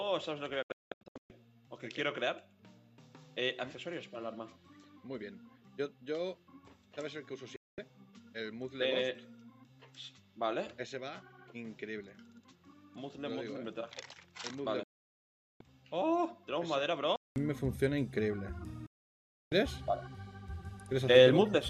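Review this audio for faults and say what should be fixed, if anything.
From 0.0 to 17.36 s the audio is narrower in band, about 10 dB quieter, with added noise, then clears after a 200 ms silence. This is likely an input switched to a poorer device. Lock the recording input to the intended microphone and disable automatic headset or call-profile switching.

Digital broadcast dropouts mute the audio with roughly 3 ms fades at 0.62–1.30 s (several short holes, longest 192 ms), 7.56–7.78 s, 14.83–15.61 s and 18.86–19.52 s; the lost material is gone. Improve reception margin or take a wired or network feed so corrupted frames stop triggering muting.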